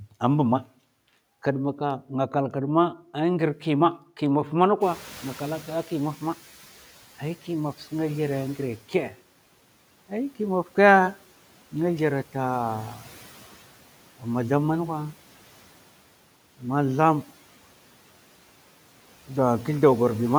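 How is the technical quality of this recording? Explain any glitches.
The recording has one glitch, a noise suppressor catching up after the room noise jumps by about 19 dB around 5 s. From 4.81 to 6.9 s, that noise passes with less reduction, then fades by about 9 dB as the estimate adapts. A gate would cut in and out with the speech instead.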